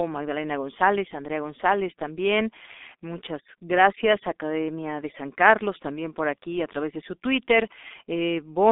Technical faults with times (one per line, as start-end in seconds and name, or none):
0.00-8.71 G.723.1 codec